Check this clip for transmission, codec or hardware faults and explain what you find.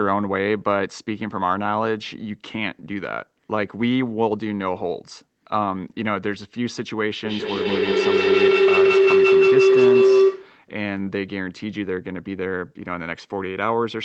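One fault is audible: a feedback howl from 7.25 s to 10.6 s, heard through a call path whose Opus coding limits the audio to about 8 kHz. Two devices in the same room share the call, so the microphone picks up the loudspeaker and each pass round the loop gains level. The repeats, roughly every 150 ms, grow rather than decay and narrow to a tone around 400 Hz, peaking about 8 dB above the speech.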